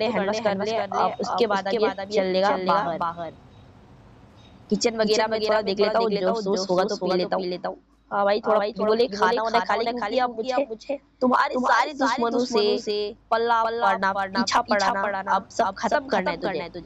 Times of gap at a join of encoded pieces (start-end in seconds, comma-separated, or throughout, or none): none